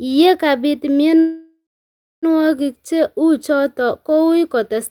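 At 1.19 s a call audio freeze begins. The sound smears into a fading buzz, then 0.62 s of silence. It resumes at 2.26 s with nothing lost, likely from delayed packets.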